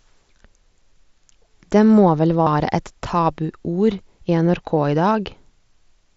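At 2.43 to 2.47 s, just after "må vel", there is concealed Bluetooth headset packet loss over a wideband mSBC link. A run of lost headset packets, roughly 45 ms, was bridged by repeating recent waveform, giving a brief buzzy, steady tone and a slight warble as real speech resumes.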